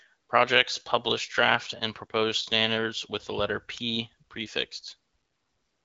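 Nothing goes wrong in this speech recording; it comes through an AMR wideband (HD Voice) link at 12.65 kbit/s, a rate where the codec only lightly shapes the sound and the speech stays clear.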